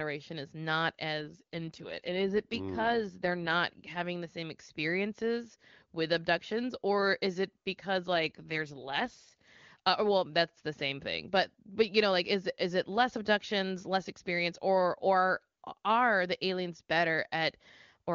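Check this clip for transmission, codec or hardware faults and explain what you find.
Two AMR rate drops are audible in this speech, from 1.20 to 3.54 s and from 8.14 to 9.48 s. In each stretch the wideband sound turns rougher and more synthetic while the bandwidth holds and nothing drops out, which fits the network stepping the AMR-WB codec down from its clean 23.85 kbit/s mode to a lower rate near 8.85 kbit/s, trading coding bits for error protection on a weak radio link, then restoring the higher rate.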